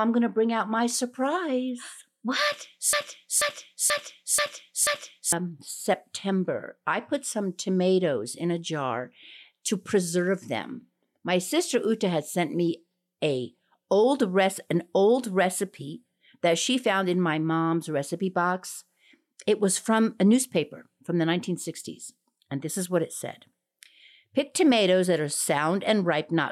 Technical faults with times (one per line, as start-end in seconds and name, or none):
2.93-5.32 broken-record loop